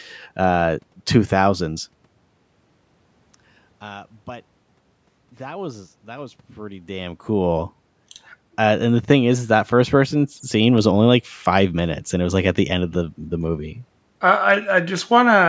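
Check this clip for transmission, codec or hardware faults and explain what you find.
Nothing stood out on listening to this speech.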